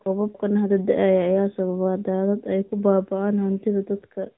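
Thin, boxy and plainly buzzy throughout, this speech recording has no content above 3.8 kHz and a synthetic edge on every syllable. That is the AMR narrowband mobile codec at work. Its pulse-driven vocal-tract model at this plainly audible level of damage fits a mid-rate mode of around 10 kbps. From 0.00 to 0.04 s a very faint trailing copy of the voice appears, and it returns more clearly from 0.32 to 0.40 s. Both copies lag by about 0.4 s, the first very far down in level and the second noticeably stronger. This is likely an echo leak, where the far end's loudspeaker output reached its microphone and the echo canceller failed to remove it all. Between those two moments, from 0.13 to 0.32 s, the room sound sinks sharply, by as much as about 39 dB, for roughly a fifth of a second before coming back. That dip is background gated by the echo canceller, which clamped the microphone hard while the loudspeaker was active. 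The call microphone processing's low-bass filtering is present as expected.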